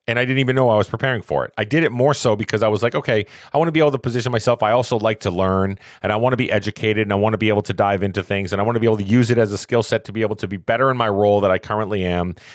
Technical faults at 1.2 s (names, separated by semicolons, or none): gain pumping